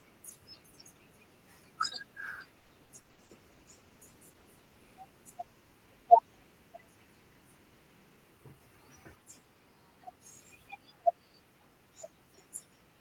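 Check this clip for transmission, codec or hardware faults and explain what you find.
Yes, there's a transmission problem, with two faults stacked in the first half and one brief one later.

From 2.59 to 3.32 s there's repeated packet loss with a robotic sound. Roughly five holes land in quick succession, the longest about 100 ms. Each is patched by stretching the last bit of sound, so around 41% of that span is filler. The speech comes out choppy and robotic.

From 3.06 to 5.35 s there's a call bitrate drop, overlapping the loss. The bandwidth estimate fell and the encoder coded more coarsely. The change in quality suggests a fall from around 32 kbps to about 18 kbps, bottoming out for roughly 1.5 s. The speech turns rough and watery.

From 8.10 to 8.60 s there's a jitter buffer speed-up. The receiver had too much audio queued and trimmed out short pitch-period chunks, about 70 ms in total. 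The speech runs about 14% faster at the same pitch, so it sounds briefly hurried.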